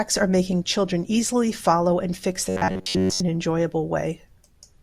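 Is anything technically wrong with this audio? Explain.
Yes. From 2.49 to 3.20 s the speech takes on a robotic sound from repeated short buffers. New audio likely arrived too seldom, so the playback repeated its last fragment to fill the gaps. For roughly two thirds of that stretch, repeats replace the real audio. They impose a steady buzz at 93.8 Hz, which fits a fragment about 10.7 ms long. The voice becomes a rigid, metallic drone that still loosely tracks the speech.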